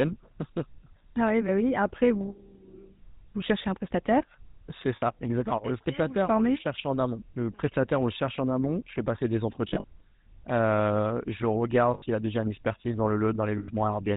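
GSM full-rate codec, throughout: the speech is rebuilt from a vocal-tract model driven by sparse, regularly spaced pulses, consistent with the 13 kbps full-rate coder, and nothing above 4 kHz survives. The result is a plainly audible buzzy, gravelly roughness.

Lost GSM frames at 4.96 s, 9.68 s, 11.94 s and 13.58 s: each gap is filled by repeating the last good frame, heard as a brief rough, metallic ring. After "cherchez un prestataire c'est" it lasts 60 ms. After "fais passer des", 100 ms is scattered across 160 ms, with the longest run around 40 ms. After "je regarde", before "a déjà une expertise", it lasts 80 ms. The last gap lasts 100 ms.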